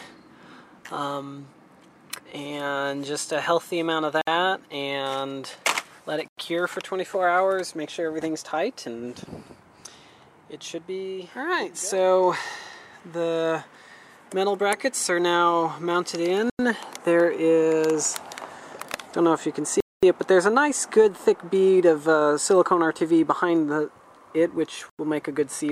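At 4.21 s the sound drops to a block of digital silence for about 58 ms, then again at 6.28 s, 16.50 s and 24.90 s for 93 ms each, which fits a 4096-sample buffer going out empty. The longest one, 224 ms from 19.80 to 20.03 s, is a real hole. Each cuts hard to silence and back with no fade.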